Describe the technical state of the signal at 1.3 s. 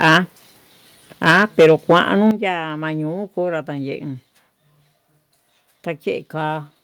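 At 1.3 s the signal is in microphone overload. The harsh, crackling edge runs from 1.25 to 2.27 s. The peaks sit about 9 dB past the converter's limit. Their tops are flattened, and around one sample in twenty is clipped. The likely cause is an input volume set too high for the converter. The loudest syllables in this stretch of speech break up and sound gritty instead of rounded.

Right at 1.31 s the microphone volume steps down. The level of the speech and the background drops abruptly by about 3 dB. The change is a single step, not a gradual fade. It comes just after the first distorted peaks. Call software that detected the clipping and cut the device's input gain is the likely explanation. The distortion continues after the step, because a 3 dB cut is far smaller than the overload.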